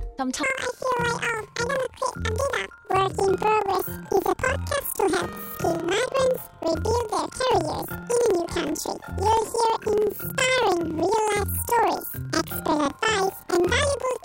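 From 0.43 s to the end, the audio plays as planar audio read as interleaved. Each block of roughly 46 ms, which fits a 2048-sample block, holds all of one channel followed by the other, but the reader treats it as alternating left-right pairs. Each block therefore plays twice at double speed, so the sound jumps an octave high with a flutter at about 21.5 Hz. Unlike a sample-rate error, the overall pace and length stay correct.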